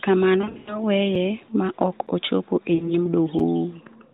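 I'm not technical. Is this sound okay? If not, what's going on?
No. There are two kinds of fault in this speech recording.

Lost AMR speech frames happen between 0.42 and 0.82 s, and again from 2.75 to 2.95 s just after "ma ok ochopo e". Pieces of the phone signal went missing, so the decoder filled in by stretching the last good sound. The result is a smeared, wobbly stretch that fades out rather than a sharp cut.

A block of digital silence appears three times: at 1.15 s, at 2.07 s between "ma ok" and "ochopo e", and at 3.39 s. Each is a tiny gap of a few thousandths of a second where the sound drops instantly to nothing. It is heard as a click or tick, abrupt and with no fading, which is what sets it apart from the lost frames.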